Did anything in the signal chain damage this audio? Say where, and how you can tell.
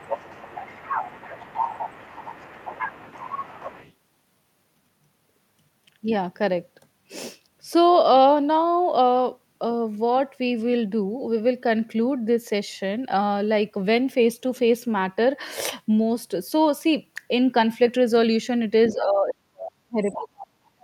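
Yes. A second voice leaks through from 0 to 3.93 s at about 10 dB below the talker, then in faint scraps at 18.88 to 19.04 s and 20.12 to 20.16 s. On a spectrogram, a separate set of harmonics sits under the main voice. This is other side's voice leaking through, likely from incomplete echo cancellation in call processing.

From 18.92 s to the end, while the far side is playing, the talker's level falls sharply, by up to roughly 40 dB. On the waveform the envelope collapses, and the spectrogram thins and darkens. This is speech suppressed in double talk, likely caused by the echo canceller turning both voices down at once.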